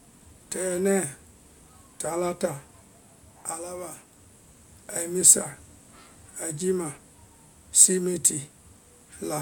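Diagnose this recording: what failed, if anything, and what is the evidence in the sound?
Nothing failed: no stage in the chain leaves an audible trace anywhere in the speech.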